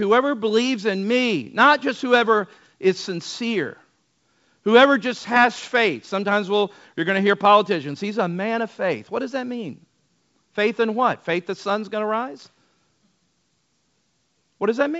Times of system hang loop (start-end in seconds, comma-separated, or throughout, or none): none